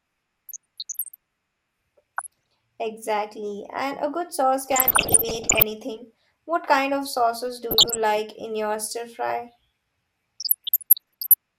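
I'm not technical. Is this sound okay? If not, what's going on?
No. This is DAB burbling: weak digital radio reception let corrupted data through, so parts of the speech get short blips of noise at 0.49–1.16, 2.17–2.53, 4.61–5.63, 7.71–7.97 and 10.40–11.34 seconds.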